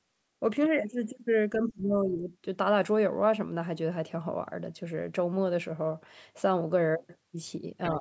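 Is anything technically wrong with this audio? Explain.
Yes. From 1.55 to 2.31 s the speech dips hard, by around 25 dB at worst, for roughly 0.7 s. That's likely speech suppressed in double talk: the echo canceller couldn't separate the talker from loudspeaker echo and ducked both. It returns briefly at 7.96 s, a small dip of about 5 dB right at the end.

From 7.83 to 7.9 s there's a faint scrap of the other side's voice leaking through, roughly 20 dB below the speech, likely residual echo the canceller missed. The call microphone processing is there too, with nothing above 8 kHz.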